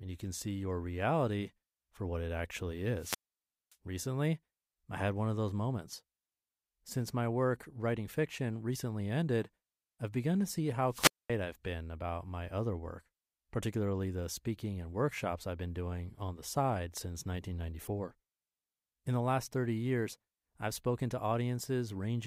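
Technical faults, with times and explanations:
2.97–3.76 s and 10.88–11.31 s, wireless microphone squelch dropout: the FM signal fades, hiss swells briefly, then the receiver's squelch shuts the output, leaving holes of near silence about 0.57 s and 0.23 s long before the speech comes back.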